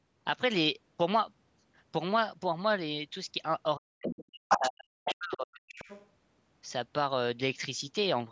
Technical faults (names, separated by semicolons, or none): speech suppressed in double talk; other side's voice leaking through